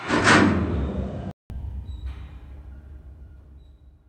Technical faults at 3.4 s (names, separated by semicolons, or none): none